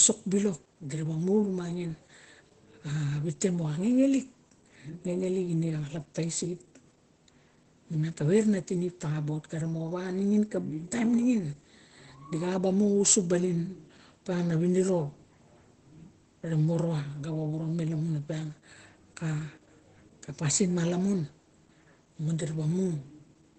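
Throughout the speech, Opus voice compression is plainly audible. Nothing is present above about 8.8 kHz, consistent with the wideband SILK mode, so the top of the spectrum is gone and sibilants sound dull. The linear-prediction coder quantises the excitation coarsely, leaving the voice slightly hoarse and faintly robotic. The degree of damage points to a low bitrate, around 12 kbps, which matches this muffled, thinned character.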